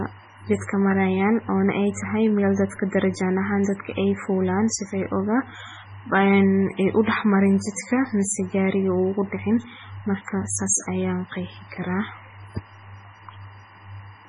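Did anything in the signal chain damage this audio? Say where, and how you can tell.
Yes. Timecode bleed entered in the analogue wiring. A chirping warble, alternating near 1 kHz and 2 kHz, sits around 30 dB below the speech for the whole clip. Its rhythm fits 24 frames per second of code leaking from a neighbouring line.

Heavy watery, swirly artefacts run throughout, and nothing remains above 10.6 kHz. This is likely MP3 compression at the codec stage, starving weak spectral lines, which fits a bitrate near 16 kbps.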